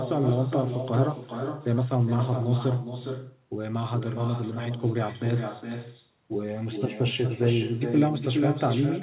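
From start to finish, every phrase is followed by a second, fainter copy arriving roughly four tenths of a second later and only about 7 dB down. This is echo with no canceller: the far end is playing the call through a loudspeaker, its microphone picks that sound up again, and nothing removes it before it travels back. The returning copy is thinner than the original, and it sits on top of the narrowband call sound, which stops at 4 kHz, consistent with a telephone-grade codec.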